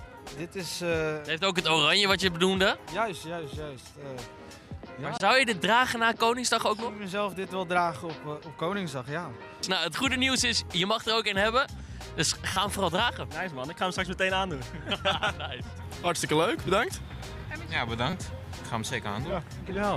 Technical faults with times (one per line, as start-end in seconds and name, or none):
5.17-5.20 corrupt frame decoded
12.53-12.61 corrupt frame decoded
18.10-18.13 corrupt frame decoded